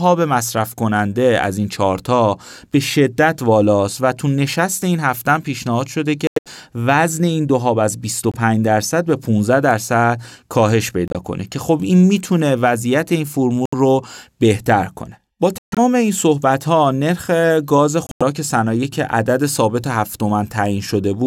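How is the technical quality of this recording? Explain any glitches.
The recording has six sudden dropouts where damaged compressed frames were discarded and replaced with silence. The gaps fall at 6.27 to 6.48 s, 8.32 to 8.35 s, 11.08 to 11.16 s, 13.66 to 13.75 s, 15.58 to 15.79 s and 18.07 to 18.23 s.

Each is a corrupt frame muted fault. Flipped bits made the decoder reject the affected frames, and the player inserted silence of the same length, so the speech cuts out abruptly and resumes on time without any shift in timing. The holes range from a brief 36 ms blink at 8.32 s, about one frame's worth, to gaps of about 0.2 s at 6.27 s and 15.58 s, which span several consecutive frames.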